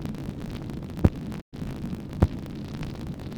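Right from the start there's a steady buzz at about 54.4 Hz, and the whole thing runs roughly 1.16 times fast without the pitch shifting. That's a block size mismatch (truncated): one stage writes longer blocks than the next reads, which fits 1024-sample blocks, and each block's tail gets dropped.

At 0.84 s there's a quick skip where a short slice, around 20 ms, just vanishes and the two sides butt together. More of the same follow at 1.68 s and 2.53 s, spaced about 0.84 s apart. Audio missing between chunks is the likely cause, with the recorder losing a bit each time it rolls over a roughly one-second chunk that the speed-up squeezes.

Between those, from 1.40 to 1.57 s, there's a digital broadcast dropout. The sound fades out over about 20 ms and stays muted while roughly 128 ms of programme goes missing, which sounds like three lost frames, and then it comes back.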